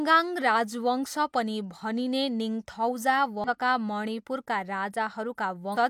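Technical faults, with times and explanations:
3.44–3.49 s and 5.72–5.77 s, damaged data in a compressed stream. Two short disturbances break into the speech, the first just after "पनि भनिने निङथौजा". Each lasts about 50 ms. Part of the coded stream is wrong there. The decoder misreads those frames and loses sync. It then hunts for the next valid frame header. This is heard as a brief chirp, squawk, click or short hole.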